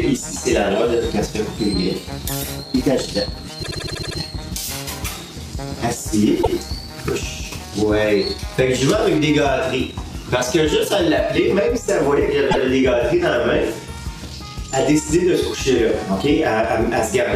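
Repeated frames at 3.62 s, 6.42 s and 12.50 s replay a compressed block: 78 ms looped seven extra times, then 131 ms once each, stuttering and lengthening the audio.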